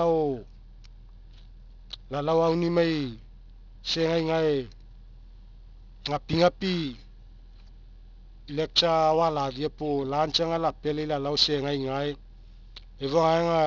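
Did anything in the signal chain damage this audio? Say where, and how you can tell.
Yes. Aliasing throughout, from unfiltered sample-rate conversion: sibilants turn gritty and run hard up to a 6 kHz edge, which fits a 44.1 kHz to 12 kHz drop. Strong folded content sets it apart from clean band-limiting.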